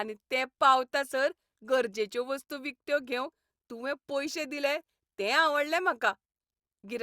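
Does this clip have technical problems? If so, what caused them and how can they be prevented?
No, nothing goes wrong technically in this bit of speech, so there's no cause to track down and nothing that needs preventing.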